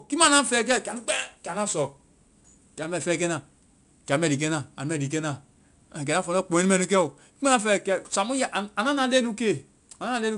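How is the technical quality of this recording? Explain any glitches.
The recording's quality is held back throughout by 4-bit ADPCM compression. Each sample is a coarse step from a prediction, so gritty hiss follows every loud syllable. The roughly 89 kbps rate fits a 22 kHz sample rate, and nothing exceeds 10.6 kHz. A spectrogram shows level-tracking broadband noise under a flat ceiling.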